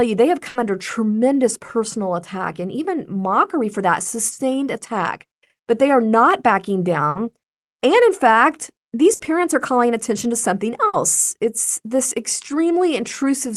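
A burst of packet loss hits the speech four times: 0.49 to 0.58 s, 7.09 to 7.18 s, 9.13 to 9.22 s and 10.87 to 10.96 s. Each time, a run of packets never arrived in time. The receiver stretched the last sound for about 60 ms, fading it into a buzz or hiss. Then the speech jumps ahead, skipping roughly 60 ms. The call codec, likely Opus, tops out near 12 kHz.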